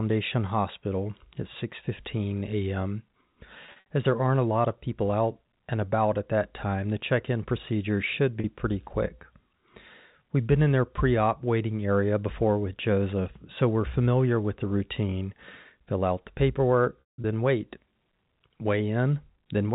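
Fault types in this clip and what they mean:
Packet loss with pitch repetition: packets were lost and the receiver bridged each gap by repeating the last pitch period. A 40 ms gap at 8.4 s, between "check in procedure should" and "pretty quick", sounds like a brief buzzy hold, while a 180 ms run near 17.0 s fades into silence.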